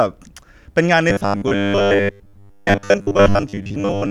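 From 1.1 s to the end, the speech turns robotic from repeated short buffers. It becomes a rigid, metallic buzz fixed at 100 Hz. New audio likely arrived too seldom, so a 10 ms chunk was replayed for most of the time while real audio was skipped.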